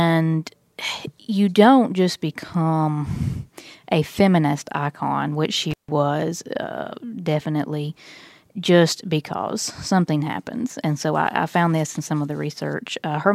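Intermittent contact at 5.71 to 5.89 s in this speech recording, just after "a feminist icon which": a loose cable or plug opens for about 150 ms, cutting the sound out with crackle at each edge.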